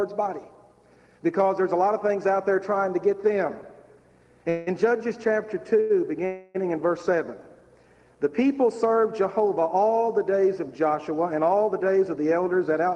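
At 4.49 s and again at 6.26 s the sound hangs in a call audio freeze of 173 ms and then 289 ms, the last sound drawn out as a fading buzz or hiss. Packets were likely held up in transit, emptying the jitter buffer. Nothing is lost and playback resumes exactly where it stopped, which sets it apart from a dropout.

At 5.80 s a short stall from a late packet holds a sound for 92 ms with a slight buzz or dip before it continues. It is the same delay mechanism on a smaller scale.

From 11.35 s to 12.89 s a jitter buffer speed-up runs the audio about 8% fast at unchanged pitch. Roughly 150 ms of accumulated delay is trimmed away in small pitch-period cuts, so it sounds hurried rather than higher, unlike a simple faster playback.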